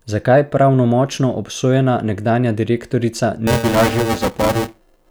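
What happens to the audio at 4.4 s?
At 4.4 s the speech is inside a stretch of buffer tearing that begins at 3.47 s, right after "pravnomočno obsojena nekdanja direktorica", and runs to the end of the clip. The writer and reader of the playback ring buffer have drifted so they cross mid-period. In each buffer, about a third of the samples are stale audio from a few milliseconds earlier, with hard edges on both sides. The result is a robotic buzz at 345 Hz, which fits a 128-sample buffer.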